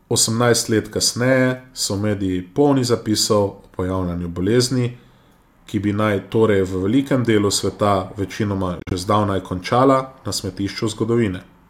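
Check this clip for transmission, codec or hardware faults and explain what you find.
One fault: a Bluetooth dropout at 8.79 to 8.93 s, between "velikem delu sveta večinoma" and "že zdavnaj končala". Packets likely reached the headphones too late and were dropped, leaving 70 ms of silence across 112 ms (longest gap 42 ms). The speech resumes further along, as if it had kept playing.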